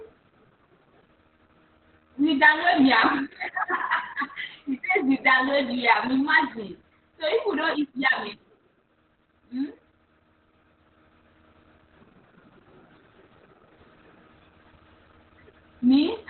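Throughout the speech, Opus voice compression in its narrowband SILK mode cuts everything above 4 kHz and codes the excitation coarsely, which fits a bitrate near 8 kbps. Unlike a plain low-pass filter, it leaves the voice hoarse and faintly robotic as well as muffled.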